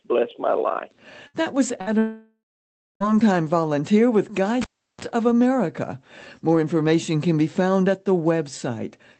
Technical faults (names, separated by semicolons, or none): burst of packet loss; long network dropout; cable pulled and plugged in